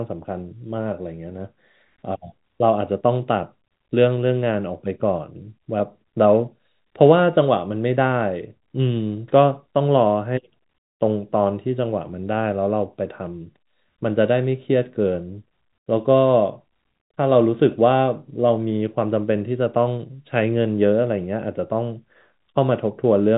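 No technical faults are audible.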